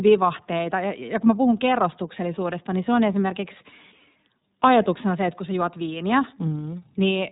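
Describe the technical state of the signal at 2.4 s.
At 2.4 s the speech carries iLBC codec damage, present across the whole clip rather than starting or ending there. The codec codes each frame's excitation on its own, with a frame rhythm that fits 30 ms frames and a rate near 13.3 kbps, and passes nothing above 4 kHz. The result is plainly audible: a dull, narrowband sound with a slightly rough, synthetic edge on the speech.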